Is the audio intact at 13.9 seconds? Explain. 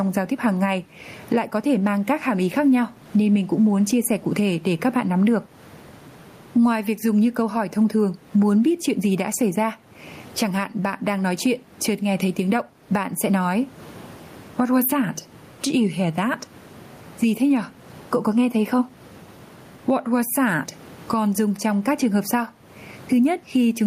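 No. Gain pumping runs through the whole clip, including 13.9 s. The input gain is likely set far too high, so a fast limiter ducks each loud syllable. The gain swings by about 15 dB.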